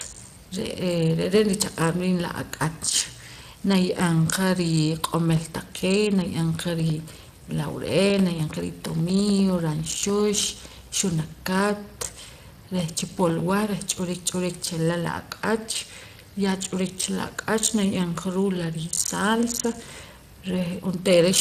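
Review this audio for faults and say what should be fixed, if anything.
Speex codec damage is plainly audible through the whole speech clip. This CELP coder, at a setting that points to roughly 22 kbps, has too few bits to rebuild the excitation, so voicing turns noisy and hoarse. Unlike a low-pass filter's dullness, this is roughness within the voice itself, though nothing above 15.3 kHz survives either. To prevent it, record or transmit with a higher-rate or more modern codec such as Opus at a generous bitrate.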